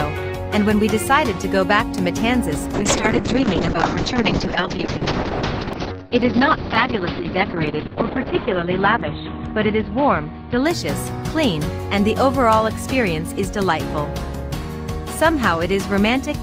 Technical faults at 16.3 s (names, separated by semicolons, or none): none